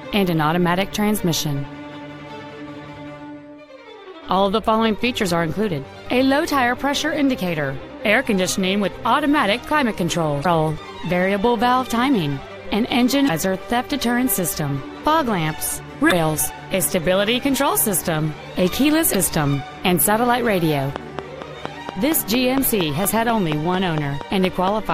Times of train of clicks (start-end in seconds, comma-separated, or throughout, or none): 20.96-24.91